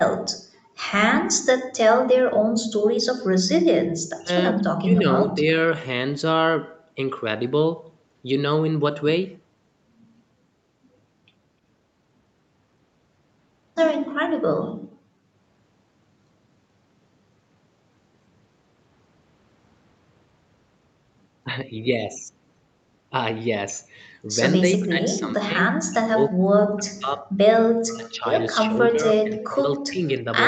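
At 4.19 to 4.31 s the speech briefly drops by about 30 dB, then sags again from 4.74 to 5.55 s by about 15 dB, breaking up in pieces. This is likely speech suppressed in double talk: the echo canceller, hearing both sides at once, turned the near talker down along with the echo. Unlike gating, the speech itself is what goes missing.

From 14.75 to 15.37 s the room sound underneath collapses by about 30 dB for most of that stretch, then comes back. This is background gated by the echo canceller, clamping the microphone while the loudspeaker played.

The same double-talk suppression returns more severely from 24.79 to 27.28 s, 27.8 to 28.3 s and 28.63 to 30.25 s. The speech repeatedly fades or drops out by as much as about 40 dB. Nothing above 8 kHz is present throughout, as expected on this call path.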